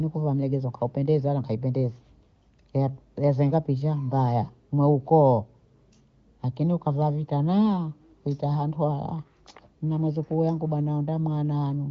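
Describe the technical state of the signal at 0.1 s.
At 0.1 s the speech is intact, carried cleanly by the AMR wideband (HD Voice) codec at a rate that points to its 23.05 kbit/s mode, with the band ending around 7.5 kHz.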